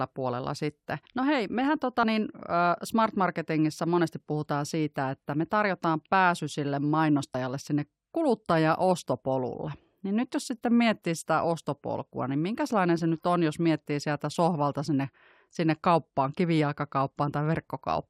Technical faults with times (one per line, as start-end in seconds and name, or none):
2.03 compressed frames skipped